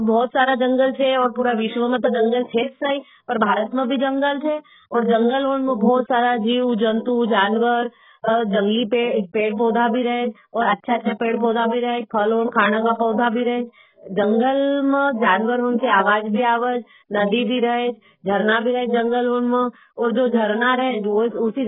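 Throughout the speech, everything above about 3.8 kHz is missing and the remaining band sounds dull and smeared, with a watery, warbling texture on sustained vowels and fizzy sibilants. This is heavy AAC compression, likely AAC-LC at a very low bitrate around 8 kbps, forcing a low cut-off and coarse quantisation. A simple low-pass filter or telephone band would cut the top cleanly without that shifting, bubbly grain.

At 2.43 s, a brief hiss of about 47 ms rises just before a sharp onset, and the attack itself arrives softened. At 10.98 s the same happens over about 56 ms. This is pre-echo: the codec spreads noise sized for the loud transient across its whole block, so the noise also fills the quiet gap before the transient. Reverb or echo trails after a sound, but this noise comes before the onset it belongs to.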